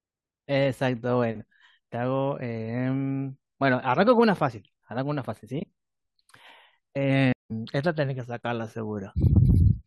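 Speech, with a stream reconnect at 7.33 to 7.51 s: the player reconnects mid-stream after 173 ms of silence and resumes roughly 150 ms later, skipping material rather than resuming like a dropout.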